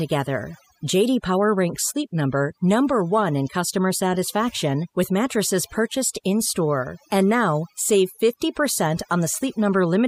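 Overdone noise removal runs through the whole of this speech clip, from the first second to the last. A noise reduction stage set far too aggressively keeps cutting individual frequency bands whenever their level sits close to its idea of the noise floor, and the softer components of the voice fall below that line along with the noise. What remains between phrases is an unnaturally dead background dotted with glittering specks.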